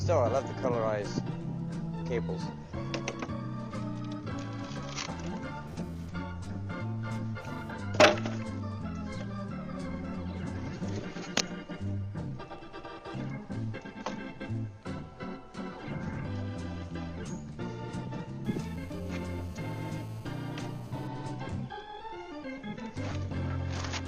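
A GSM phone buzz cuts in from 5.67 to 7.71 s and again from 18.45 to 21.08 s, a raspy 217 Hz rasp about 20 dB below the audio. It is a nearby phone's radio bursts rectified in the audio circuit. Unlike smoother mains hum, it is harsh and harmonic-rich, and the first stretch stutters like a data transfer while the second holds steady like a call.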